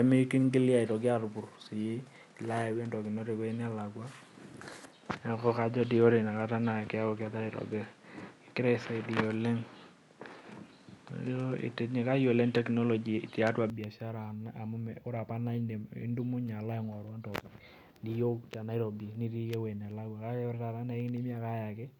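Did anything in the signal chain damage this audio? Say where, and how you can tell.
Yes. Up to 13.7 s the speech is dull, with nothing above 11.4 kHz, and a noise floor roughly 30 dB down. At 13.7 s it clears, with the level changing by about 5 dB, without a gap. This is likely an input switched to a poorer device at the driver stage.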